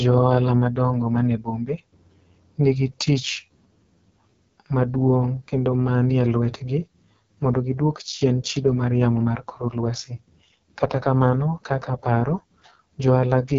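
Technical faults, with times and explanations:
Throughout, AMR wideband (HD Voice) codec: the speech is heavily roughened and raspy, with nothing above 7.6 kHz, which fits the lowest 6.6 kbit/s mode. Unlike narrowband phone coding, sibilance reaches about 7 kHz, but as shaped hiss rather than real detail.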